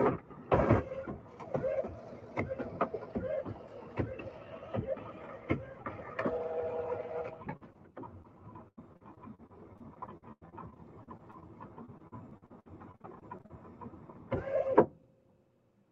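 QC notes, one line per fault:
Throughout: noise suppressor applied to music or sounds. A speech-tuned suppressor treats sustained tones, ambience and decay tails as noise and pulls them down by roughly 10 dB, while onsets pass. Level pumps with the material rather than dropping out in clean gaps, unlike packet loss.
7.57 s, 7.73 s, 8.22 s: short concealed packet loss. Three brief holes of about 40 ms, 20 ms and 20 ms were bridged by extending the preceding sound and cross-fading back, heard as a quick smear or wobble. Each stands alone, so nothing turns choppy or metallic.
8.68 to 11.44 s and 11.86 to 13.51 s: repeated packet loss (robotic sound). Gap after gap (19 in the first run, 14 in the second, longest 92 ms and 58 ms) was patched by continuation, about a quarter of each span. Patches arrive in quick succession, giving a choppy, robotic texture instead of isolated blips. The band limit near 8 kHz comes from the Opus call path.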